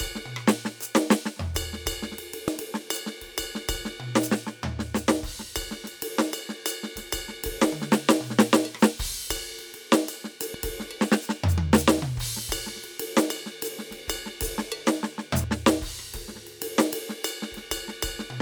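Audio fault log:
2.48–2.51 s, 10.54–10.58 s and 15.44–15.47 s, damaged data in a compressed stream: three bursts of about 30 ms each cut into the music as short chirps or blips. At each point the encoded data itself is corrupt. The decoder misreads the broken frame, loses its place in the bitstream and emits garbage until it locks onto the next valid frame header, so the disruption is abrupt and brief.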